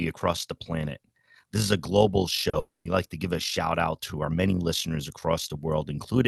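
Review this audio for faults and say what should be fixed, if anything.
Overlap-add ripple runs through the whole clip: frames were rejoined with windows that do not sum to constant gain, so the level pulses about 6 dB at around 50 Hz, giving a rough robotic flutter.

Short concealed packet loss occurs at 2.49 to 2.55 s: about 40 ms of audio never reached the decoder, and the receiver extended the preceding sound, leaving a brief smeared wobble.

From 2.59 to 2.87 s, the preceding sound is stretched and fades over about 260 ms, the last 180 ms or so of it silence, before speech returns with that stretch missing. This is likely a long network dropout.

To prevent these faults, use analysis and synthesis windows whose overlap sums to a constant gain, and stabilise the network link or use a deeper jitter buffer with forward error correction so late packets are not lost.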